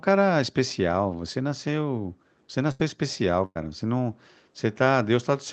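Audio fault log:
2.71 to 2.81 s and 3.45 to 3.57 s: burst of packet loss. Lost audio (80 ms, then 100 ms) was replaced by a fading copy of the preceding sound, which the spectrogram shows as smeared, decaying bands. The second gap ends in about 40 ms of flat silence before the waveform resumes.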